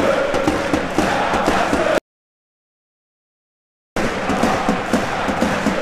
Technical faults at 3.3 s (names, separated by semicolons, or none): audio dropout to silence